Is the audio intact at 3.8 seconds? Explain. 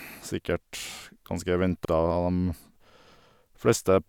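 Yes, the speech at 3.8 seconds plays through cleanly, with no dropout, click, distortion or other fault at that moment.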